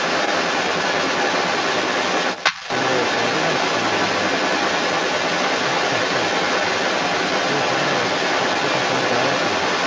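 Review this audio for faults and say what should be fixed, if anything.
From 0 to 9.86 s there's the other side's voice leaking through, a second voice a bit louder than the talker, likely loudspeaker playback the echo canceller missed. A headset or better-tuned echo cancellation would keep it out.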